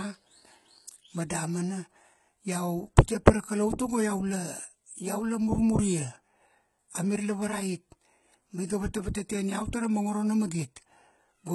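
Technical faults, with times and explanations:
Throughout: HE-AAC compression, likely the cause of the heavy codec damage heard across the speech. Only the lower spectrum carries real detail; the treble is rebuilt by copying lower bands upward and shaping them with a coarse envelope. The upper harmonics therefore fail to line up with those below the crossover, and s sounds come out gritty, metallic or lispy. The degree of damage fits a low bitrate around 16 kbps.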